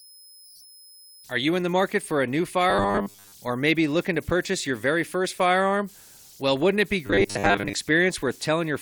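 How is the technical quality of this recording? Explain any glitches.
The recording has two audible problems: a faint high whistle that runs throughout, and two brief stretches where the speech turns into a mechanical buzz.

Converter idle tones are present throughout: an undithered delta-sigma converter cycles through repeating bit patterns, producing a whistle around 5 kHz, about 29 dB below the speech.

Robotic sound from repeated short buffers occurs at 2.70–3.32 s and 7.06–7.73 s: a rigid 100 Hz buzz, likely from replaying 10 ms buffers while most real audio is skipped.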